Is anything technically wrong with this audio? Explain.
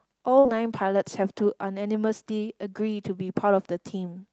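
Yes. There are two packet-loss faults in this speech, close together near the start.

From about 0.39 to 0.58 s there is a burst of packet loss. Around 60 ms of the stream never arrived in time, and the receiver covered roughly 52 ms of that by extending the last decoded sound while lowering its level. A voiced sound becomes a held, fading buzz, and an unvoiced one becomes a decaying hiss. Playback then resumes further along, so a short stretch of speech is simply gone.

Inside that region, from 0.47 to 0.50 s, there is also a short concealed packet loss. About 20 ms was missing, and the decoder synthesised around 12 ms from the preceding pitch or noise shape before crossfading back to real audio. The result is a brief smear or wobble, layered on top of the longer dropout.

The call path runs through Opus, and its audio bandwidth tops out near 8 kHz, which fits a moderate bitrate around 32 kbps. 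That path is working normally and is not a fault.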